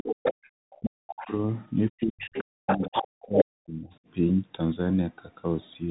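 Throughout, the speech runs through what sounds like the Bluetooth CVSD headset codec, a one-bit delta coder at 64 kbps, so nothing passes above about 3.8 kHz, sibilants turn scratchy and a granular hiss sits underneath. The call's microphone high-pass trims only the deepest bass.

From 0.0 to 0.5 s the other side's voice leaks through, likely from echo cancellation leaving loudspeaker sound in the microphone, arriving nearly as loud as the talker. Further leaks follow at 1.2 to 1.36 s (faint), 2.19 to 2.44 s (somewhat quieter), 2.67 to 3.06 s (nearly as loud), 3.35 to 3.45 s (briefly louder than the talker) and 3.9 to 3.99 s (barely audible).

Overlapping these, speech is suppressed in double talk from 0.46 to 1.41 s and from 1.91 to 3.89 s. Here the canceller likely mistook the talker for echo during simultaneous speech and attenuated everything, so the voice dips by as much as about 40 dB, affecting roughly one and one-and-a-half seconds respectively.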